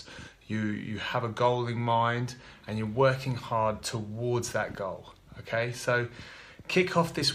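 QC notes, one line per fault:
Nothing to flag here, since no technical faults turned up anywhere in this audio.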